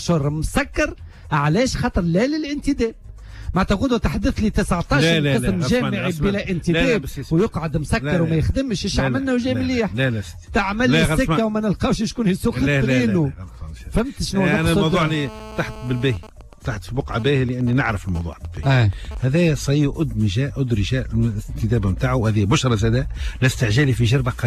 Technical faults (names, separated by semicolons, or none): GSM phone buzz; GSM signalling bursts